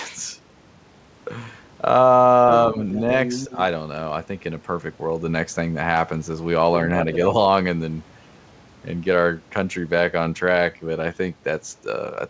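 From 2.94 to 2.99 s, then 3.25 to 3.59 s, a second voice intrudes. This is the other side's voice leaking through, likely loudspeaker echo the canceller missed. It sits about 20 dB, then about 10 dB, below speech.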